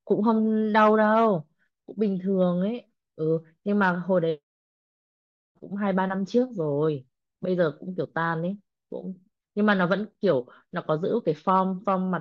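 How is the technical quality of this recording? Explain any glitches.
Nothing stood out as a technical problem on listening to this recording.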